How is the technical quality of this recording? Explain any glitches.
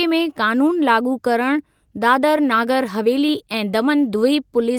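The recording has a timing problem that runs through the whole speech clip, heard as small, unevenly spaced hiccups rather than any loss of tone or level.

Clock drift between sender and receiver is present throughout. The sending device's audio clock runs around five percent fast relative to the receiving side, so samples arrive slightly quicker than they are played out. The jitter buffer therefore keeps creeping fuller. Unlike ordinary network jitter, which is random in both directions, this pressure is steady and one-sided, and it never lets up across the clip.

Repeated timing corrections run from about 0.32 s to 4.71 s as the receiver's response to that drift. To keep the buffer from overflowing, it trims short pieces out of the audio again and again, effectively playing the material at about 105 percent. Each trim is tiny, so the sound comes across as a faintly rushed, slightly uneven tempo with occasional small skips. 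Packet loss leaves gaps or smeared concealment. These edits remove audio cleanly and always in the same direction, at irregular intervals.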